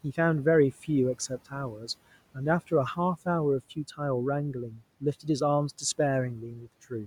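The noise suppressor mistook parts of this speech recording for background noise. Twice, from 4.7 to 4.82 s and from 6.53 to 6.68 s, it pulled the level down by about 10 dB along with the room noise, which sits about 23 dB below the speech. Each cut lasts only about 0.1 to 0.15 s, but it leaves soft consonants or word endings sounding swallowed and faint.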